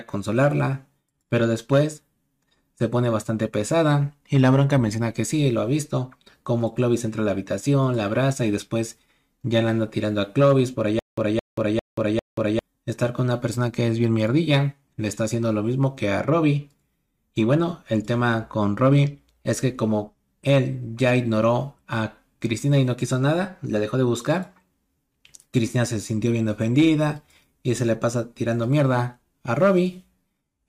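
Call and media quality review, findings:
Stutter with silent gaps, 10.99–12.59 s. Likely a player or stream stall: each retry replays the last 217 ms fragment, then runs dry for 183 ms of digital silence. The identical burst recurs 4 times at an even 400 ms period. Audio due in that span is lost.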